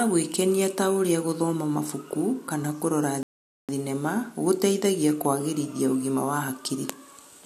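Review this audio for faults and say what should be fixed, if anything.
A rebuffering stall runs from 3.23 s to 3.69 s: the player exhausted its downloaded speech, went silent for about 0.46 s, then resumed exactly where it stopped with "thinema gũteithagia kũagĩrithia ũgima", so nothing is lost but delivery is delayed. To prevent it, keep a larger playback buffer or use adaptive bitrate streaming.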